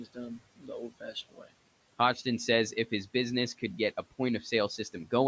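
Noise suppressor artifacts run through the whole speech clip. The suppressor estimates the steady room noise, which sits about 19 dB below the speech, and pulls those bands down by about 18 dB frame by frame. The background therefore drops away in the gaps and swells back under each phrase, pumping with the speech, within a call-processed band that stops at 8 kHz.

Speech cut by the noise suppressor happens twice, from 0.38 to 0.70 s and from 0.89 to 1.51 s. The suppressor treated parts of the speech as noise and lowered them along with the background, by up to about 16 dB in the first stretch and about 17 dB in the second. Only brief portions inside each window are affected, roughly 150 ms in the first and about 300 ms in the second. Those parts sound swallowed and faint.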